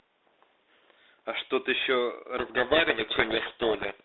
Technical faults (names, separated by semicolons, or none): codec payload misread